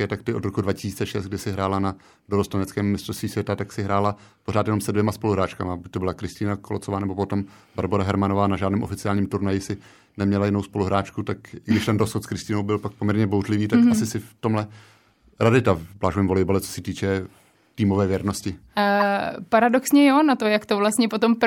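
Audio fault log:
9.82–9.87 s and 19.00–19.02 s, corrupt frame decoded: the decoder played damaged frames with misread gains, throwing energy into wrong frequencies. The first is faint, the second much louder. Each appears as a short, smeared vertical patch on a spectrogram and a brief waveform spike.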